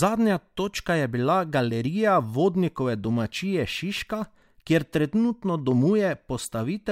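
No technical faults are audible.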